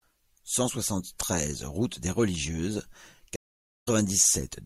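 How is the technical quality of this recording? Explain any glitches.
The speech has one glitch, a stream reconnect. At 3.36 s the sound cuts out for about 0.49 s. The connection dropped and a fresh decoder restarted, so speech resumes at 3.88 s about a tenth of a second further on.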